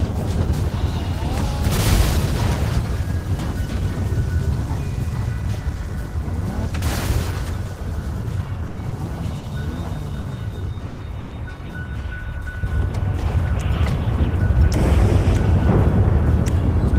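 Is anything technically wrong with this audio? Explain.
Yes. Repeated stalls (stutter) run from 8.67 to 11.33 s. Packets arrived late, so the jitter buffer emptied six times and the receiver stretched the last sound over about 390 ms of gaps, the longest 110 ms. The audio drags and stutters, but nothing is lost.

A jitter buffer speed-up runs from 14.56 to 16.69 s. The receiver trimmed short pitch-period slices, a few tens of milliseconds in all, to shrink excess buffering. The sound plays about 1% faster at unchanged pitch.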